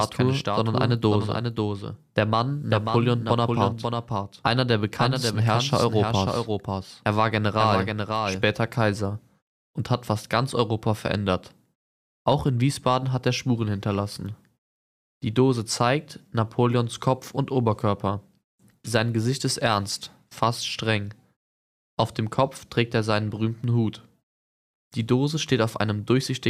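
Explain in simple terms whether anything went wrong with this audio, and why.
From the very start until 8.44 s, the audio has a doubled audio track: everything is heard twice, with a second copy following about half a second behind and somewhat quieter than the original. At 8.44 s the copy stops abruptly. It is most likely the same sound being captured a second time through a slower route. Unlike an echo or room reverberation, the copy doesn't fade away or sound roomy. It is a single clean repeat that simply cuts out.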